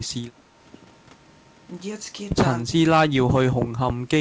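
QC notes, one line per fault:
2.64–2.84 s and 3.08–3.65 s, speech suppressed in double talk: the speech sinks and comes back, about 20 dB down in the first dip (around 200 ms) and about 25 dB down in the second (around half a second). The likely cause is an echo canceller that could not tell the near talker from loudspeaker echo while both sides spoke, so it attenuated everything, call-band audio with nothing above 8 kHz included.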